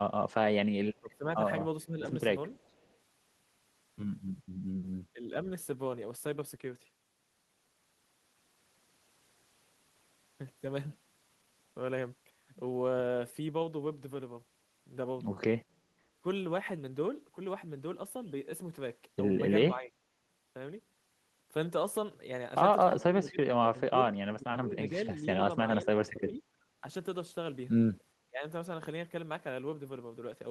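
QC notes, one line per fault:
0.94–0.99 s and 2.56–2.94 s, echo leak: a faint copy of the speech returns 423 ms late, about 40 dB down, likely loudspeaker pickup the echo canceller missed.
1.0–1.94 s, 5.13–5.47 s, 19.75–19.97 s, 23.01–26.83 s, 28.28–28.44 s, speech suppressed in double talk: the speech dips by roughly 15–25 dB in brief pieces, up to around 2 s in total at 23.01–26.83 s, likely the canceller turning down overlapping talk.
26.73–26.79 s, background gated by the echo canceller: room sound drops about 6 dB for roughly 70 ms as the canceller clamps the microphone during loudspeaker playback.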